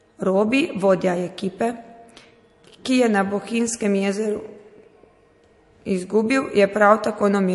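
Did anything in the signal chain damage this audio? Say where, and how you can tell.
Yes, at the codec stage: the speech has no content above 11.3 kHz and a watery, swirly texture throughout, likely MP3 compression at a low bitrate near 48 kbps.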